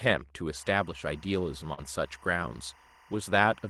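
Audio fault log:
0.56–3.69 s, timecode bleed: 24-frame linear timecode leaks in from a neighbouring line, its square wave switching near 1 and 2 kHz, a faint chirping warble about 30 dB down.
1.73–1.79 s, short concealed packet loss: 40 ms never reached the decoder, so the receiver extended the preceding sound across the hole, heard as a brief smear before blending back.
1.77–1.79 s, lost packet rebuilt from error correction: a 20 ms stretch, which points to a single lost packet, was decoded from a low-bitrate copy in the following packet, sounding rougher and noisier.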